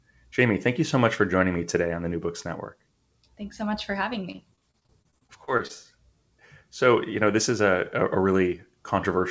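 Speech carried over a call link with nothing above 8 kHz, which fits a wideband codec, shows repeated packet loss (robotic sound) from 4.32 to 5.71 s: fifteen short gaps, none over 27 ms, are patched by extending the previous sound, leaving choppy speech across the stretch.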